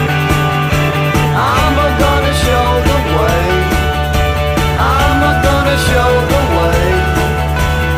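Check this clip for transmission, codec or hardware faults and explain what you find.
One fault is present. From 5.1 to 7.8 s, crude rate conversion fits a 48 kHz to 44.1 kHz change done by nearest-sample picking. That leaves an unfiltered error, roughly 25 dB down. It sounds like a gritty, inharmonic fizz tracking loud, bright sound.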